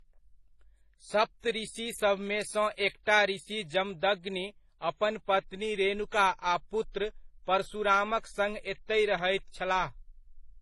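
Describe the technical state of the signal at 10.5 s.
At 10.5 s the speech shows signs of transcoding between lossy codecs, likely a low-bitrate MP3 pass followed by HE-AAC at a similarly low rate, and this runs through the whole clip. The second encoder spent its few bits re-coding the first one's artefacts while adding its own. The result is a dull sound with layered artefacts and nothing above about 12.7 kHz.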